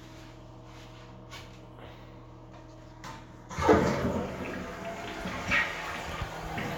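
No technical faults are audible.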